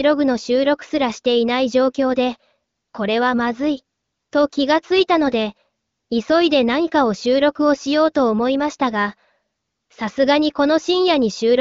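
The speech comes through with no technical faults, carried by the AMR wideband (HD Voice) codec at about 15.85 kbit/s, a rate at which this codec keeps speech clear.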